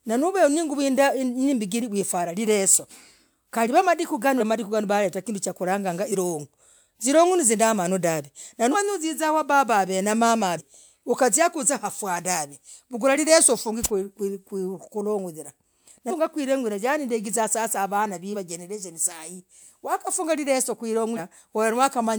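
Compressed frames skipped at 4.39, 6.11, 8.71 (before "uziza wababah avee"), 10.57, 16.09, 18.32 (before "wa jerereshonii") and 21.16 s. Each time, whole 46.4 ms frames go missing, so the sound jumps ahead by roughly 150 to 200 ms, or about 400 ms at 16.09 s. On a spectrogram this shows as an abrupt discontinuity in the harmonic tracks, and the waveform has a sudden envelope jump.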